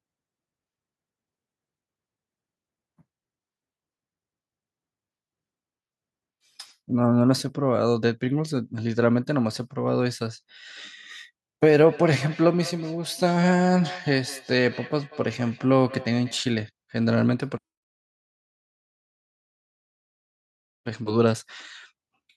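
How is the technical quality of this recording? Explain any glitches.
The recording has one clear glitch, a feedback echo between two devices from 11.8 to 16.47 s. A second device in the room replays the call, and the microphone recaptures it beyond its echo canceller's reach, so the speech returns roughly every fifth of a second, thin and ringing, peaking about 17 dB below the speech.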